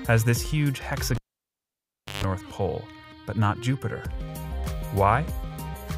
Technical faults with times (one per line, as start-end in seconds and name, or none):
1.15-2.24 cable pulled and plugged in